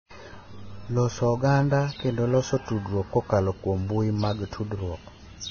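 Throughout the speech, the treble stops dead at about 6.5 kHz and what remains below it sounds hissy and grainy, with rough tones and smeared consonant attacks. This is heavy damage, likely from Vorbis compression at a very low bitrate, near 18 kbps. The encoder discards the top band and quantises the upper residue so coarsely that detail turns into noise. A spectrogram shows a flat ceiling at 6.5 kHz with blotchy, speckled texture beneath it.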